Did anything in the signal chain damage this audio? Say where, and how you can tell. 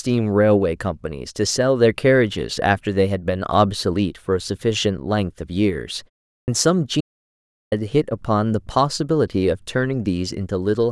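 Yes. The playback device slept through a 0.36 s pause and woke late, causing a clipped start after a pause: speech at 6.37 s loses its first 110 ms.

The input link was likely lost, so silence was recorded: an audio dropout to silence from 7.01 to 7.72 s erases speech, leaving no room tone.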